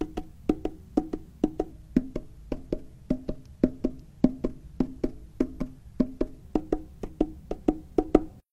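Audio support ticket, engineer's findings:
Section at the wrong speed, 1.71 to 6.43 s. Likely a playback or edit stage clocked to the wrong rate, running this span at 0.83x. Sound drops about three semitones and drags slower, then returns to normal pitch and pace at 6.43 s.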